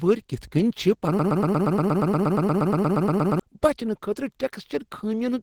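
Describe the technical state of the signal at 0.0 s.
At 0.0 s the speech is already carrying Opus compression damage, and it persists for the whole clip rather than starting or stopping here. The sound is plainly degraded: muffled and hoarse, with a rough, grainy texture in place of clean detail. That character likely comes from Opus running in its hybrid speech mode at a low bitrate, which fits roughly 16 kbps. With too few bits, bands are filled coarsely instead of being coded accurately.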